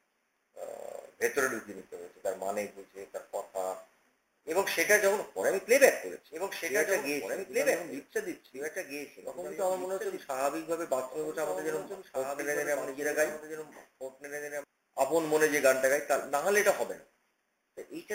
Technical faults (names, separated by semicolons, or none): doubled audio track